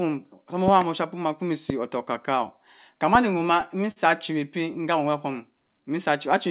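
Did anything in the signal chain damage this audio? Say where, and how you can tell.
Yes, two kinds of damage. First, loud pops sitting on top of the speech: a quick double pop from 0.68 to 0.84 s, then single pops at 1.70–1.72 s and 3.15–3.17 s. The first two peak about 15 dB above the speech, the last about 10 dB, and the speech carries straight on underneath each one. That points to the analogue wiring or driver stage, most likely a voltage step from a connector, switch or static discharge being shaped into a sharp thump.

Second, a short stall from a late packet at 3.91–3.99 s, in the network and jitter buffer stage of the call. A packet showed up late, the buffer ran dry, and the receiver held the last bit of sound for about 48 ms before picking up exactly where it left off. Nothing is lost, but you hear that moment drawn out a touch too long, with a slight buzz or dip. The playout delay ends up 48 ms longer afterwards. 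Through all of this the G.711 narrowband call path is doing its usual thing, with nothing above 4 kHz.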